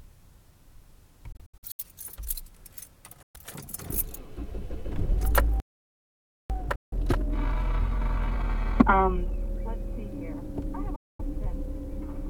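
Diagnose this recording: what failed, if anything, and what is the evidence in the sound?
The wireless link to the headphones likely failed to deliver audio packets on time, so the output drops to silence: a scattered cluster of gaps from 1.32 to 1.80 s (about 232 ms lost, longest about 70 ms), then 3.22 to 3.36 s, 6.75 to 6.93 s and 10.96 to 11.21 s. After each gap the sound resumes further on. This is a Bluetooth dropout.

At the playback stage the player likely ran out of data or was blocked. The sound stops mid-flow at 5.60 s and stays silent for about 0.9 s until 6.50 s, then continues where it stopped. This is a playback stall, an outright halt of output.

Recovery then engages time-compressed catch-up. To shrink the backlog the player cuts and cross-fades small slices, so from 6.50 to 9.50 s the sound runs at 1.25 times normal speed. Pitch is unchanged.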